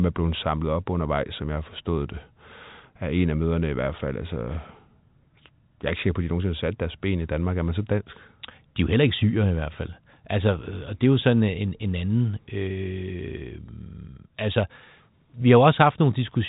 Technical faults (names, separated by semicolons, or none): none